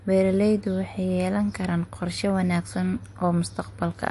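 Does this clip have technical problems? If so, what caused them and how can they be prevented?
Yes. The speech sounds watery and swirly throughout, with nothing above about 11.3 kHz and smeared consonants, likely from MP3 compression at a low bitrate, around 48 kbps: weak frequency lines flicker between frames and the treble is cut. Encoding at a higher bitrate prevents this.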